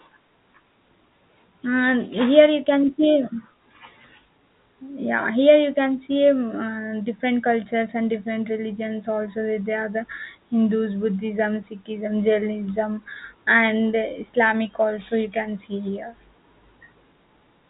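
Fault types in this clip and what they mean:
No faults present; the speech rides a G.711 A-law telephone channel at 64 kbps, so the band stops at about 3.8 kHz as that format requires.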